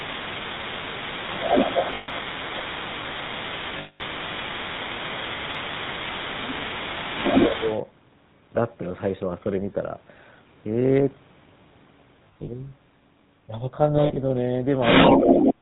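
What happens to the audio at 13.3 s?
At 13.3 s you're hearing the same thing that runs through the whole clip: the GSM full-rate codec. The speech there has that buzzy, gravelly grain and nothing above 4 kHz, so it sounds boxed-in and dull up top. This codec models the vocal tract as a filter and drives it with a regular pulse train that keeps only every third excitation sample, which fits a 13 kbps stream. The damage is plainly audible here.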